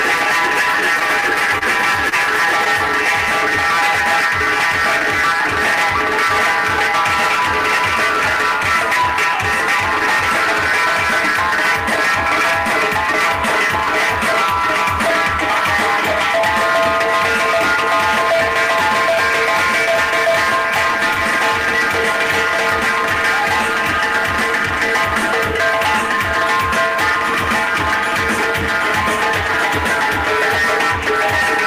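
From 0.99 to 1.63 s the audio shows repeated stalls, a stutter. Packets arrived late or too slowly for playback. The jitter buffer kept running dry. Four times the receiver stretched the last sound to cover the wait. Together these fills add up to 58 ms, about 9 percent of that stretch. The longest lasts 27 ms. Nothing is actually lost. The sound drags and catches in small jerks.

Between 2.09 and 2.90 s come scattered short gaps. Here single packets went missing or came too late, spread apart. There are about four of them. The receiver bridged each hole by carrying the previous sound forward. The patches total roughly 50 ms, and none runs much past 30 ms. No audio is missing outright. The result is brief ticks and smears, isolated hiccups rather than a steady stutter.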